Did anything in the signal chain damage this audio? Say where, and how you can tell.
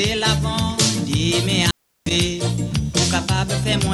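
Yes, an intermittent contact in the analogue wiring. Between 1.63 and 2.11 s the sound drops out for about 354 ms with crackle at each edge. A loose cable or plug briefly opened.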